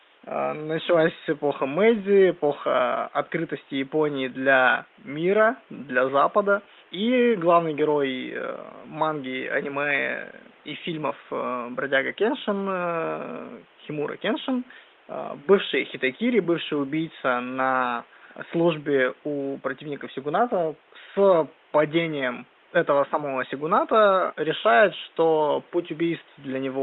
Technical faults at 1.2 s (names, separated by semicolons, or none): none